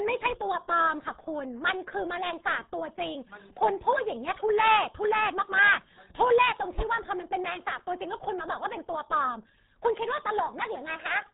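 From start to finish the speech carries RealAudio 14.4 codec damage: everything above about 3.8 kHz is gone, leaving a muffled, boxy voice, and the heavy low-rate coding adds a gargly, watery smear to every syllable, which fits an 8 kbit/s dial-up-era stream.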